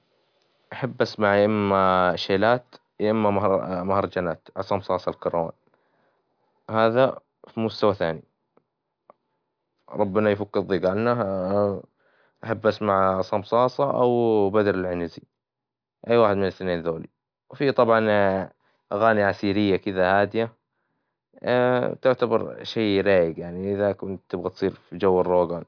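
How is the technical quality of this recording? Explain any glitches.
No glitches or technical faults can be heard here.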